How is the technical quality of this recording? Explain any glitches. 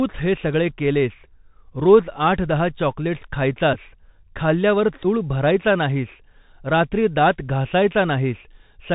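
The technical quality is poor. The speech sounds narrow and gritty throughout, and it is broken twice by short buzzy glitches.

For the whole clip, sibilants turn scratchy, loud bright moments crunch, and a grainy hiss sits under the speech, with nothing above 4 kHz. This is the Bluetooth CVSD headset codec, consistent with a 64 kbps link. It codes each sample as a single up-or-down step, so fast high-frequency movement outruns the adapting step size.

From 3.74 to 3.77 s and again from 5.03 to 5.05 s there is a brief buzzy stutter, roughly 11 ms of sound lost each time. These are Bluetooth headset packet repeats. Dropped voice packets were replaced by decoding the previous packet again, which fits about three repeated packets per event, so the 3.75 ms cycle briefly buzzes near 267 Hz.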